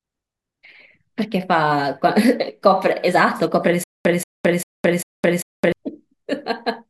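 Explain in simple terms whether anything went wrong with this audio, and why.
Between 3.84 and 5.72 s the speech breaks into a stutter with silent gaps. A short fragment, about 180 ms long, plays, then cuts to dead silence for about 216 ms, and the same fragment returns. This happens four times at an even pace of roughly 0.4 s. The likely cause is the playback or stream stalling and replaying its last bit of audio on each retry. Whatever should have played during those gaps is lost.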